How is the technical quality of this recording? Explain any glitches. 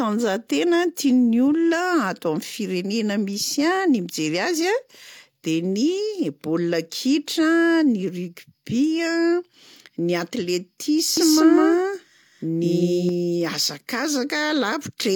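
One fault stands out. From 11.17 to 13.09 s a doubled audio track appears: a same-level copy trails about a fifth of a second behind, likely from a second capture path, giving a hard-edged echo. On a waveform or spectrogram, every syllable shows a duplicate shifted right.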